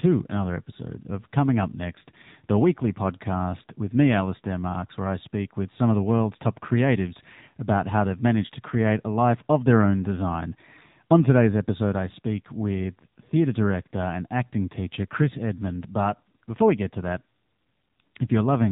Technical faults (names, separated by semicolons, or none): AMR narrowband mobile codec